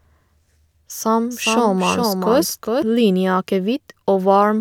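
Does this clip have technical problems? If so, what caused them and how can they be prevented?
Yes. From 1.30 s to 2.82 s there is a doubled audio track: a second, full-band copy of the speech runs around 400 ms behind the original and roughly 5 dB quieter, with no decay or room colouring, and it switches on and off abruptly at both ends. The likely cause is the signal being captured again through a slower path, or an edit leaving two misaligned copies. On a spectrogram, every syllable's pattern reappears shifted right by that fixed gap; the waveform shows a fainter echo envelope appearing and vanishing sharply. Prevent it by routing each source through a single capture path and checking edits for overlapping duplicate regions.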